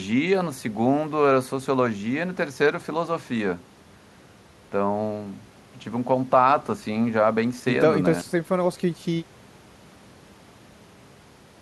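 At 8.19 to 8.29 s the speech briefly drops out, bracketed by a short crackle, with only faint hiss for about 52 ms. This is an intermittent contact: a loose cable or plug momentarily broke the signal path, then reconnected.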